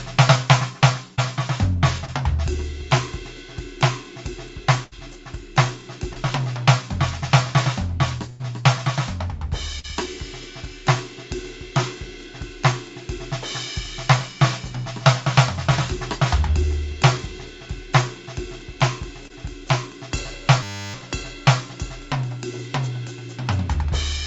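Music carried over a call path that cuts off everything above 8 kHz, which fits a wideband call codec. At 1.16 s and 2.05 s, short concealed packet loss occurs: about 20 ms of data arrived too late, and the receiver extended the preceding sound, leaving a brief smear or wobble. At 4.84 s a burst of packet loss removes about 80 ms; the concealment holds and fades the last sound before the music jumps ahead. Another short concealed loss smears 6.13 s. At 8.30 s a second burst drops about 100 ms, heard as the last sound held and fading, then a skip. Short concealed losses return at 9.79 s, the longest at about 40 ms, and at 19.28 s. From 20.63 to 20.94 s a system hang loop occurs: the computer froze while the hardware replayed one 10 ms buffer, producing a steady 100 Hz buzz with almost nothing lost.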